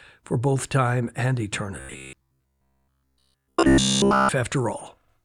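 Likely starved of fresh audio, the playback side kept looping its last short buffer from 1.8 to 4.29 s in this speech clip, essentially throughout that span. The result is robotic sound from repeated short buffers: a rigid, metallic buzz near 67 Hz, which fits a repeat of about 15 ms, following the speech only loosely.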